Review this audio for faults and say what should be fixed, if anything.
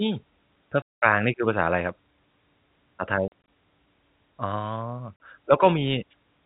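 Packet loss filled with silence cuts holes at 0.82–1.02 s (200 ms), 3.28–3.32 s (80 ms scattered over 200 ms, longest run 40 ms) and 5.16–5.20 s (40 ms). Gap lengths in 20 ms steps fit 20 ms packets. Unlike concealment, which smears or repeats sound, these gaps are true silence with hard edges. Enabling packet loss concealment, forward error correction and a deeper jitter buffer on the receiving side would prevent it.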